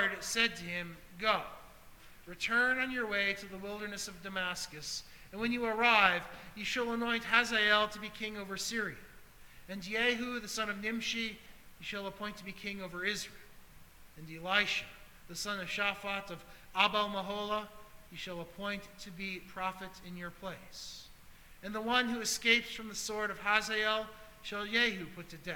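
Nothing stood out as a technical problem on listening.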